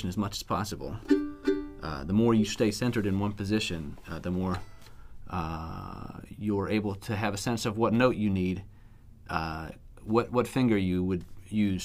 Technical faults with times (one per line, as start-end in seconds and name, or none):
none